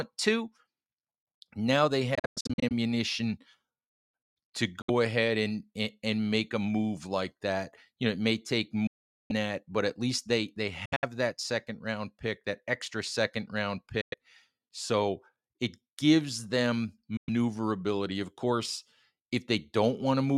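Packets on the wireless link were likely arriving too late and being discarded, a Bluetooth dropout. The speech cuts to silence and resumes further on, with the lost stretch simply missing. After "now they" at 2.15 s, about 320 ms is lost in several short holes spread to 2.72 s. A 64 ms gap at 4.82 s comes before "ahead and and make". About 430 ms is lost between 8.87 and 9.32 s. Broken gaps between "at least they they" and "that second round pick" run from 10.85 to 11.05 s. Further 107 ms gaps fall at 14.01 s and 17.17 s.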